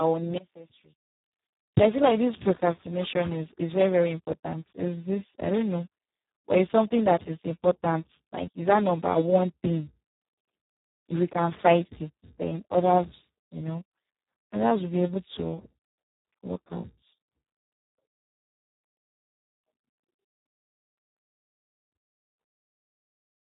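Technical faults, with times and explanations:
Throughout, Speex codec: heavy damage here, with the speech sounding hoarse, buzzy and edging toward robotic. At a bitrate around 4 kbps the codec has almost nothing left to describe the excitation, so the voice smears into noise, and nothing survives above about 3.8 kHz.
0.38 to 1.18 s, one channel inverted: the speech drops by about 23 dB into a faint remnant just before "so i feel like". That's likely one stereo channel with flipped polarity, so the centred voice cancels when the two channels are summed to mono.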